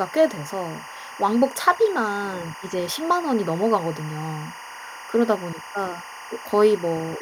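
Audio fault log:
Throughout: timecode bleed, 24-frame-per-second timecode leaking from a neighbouring line, laying a steady chirping warble near 1 and 2 kHz roughly 15 dB under the speech.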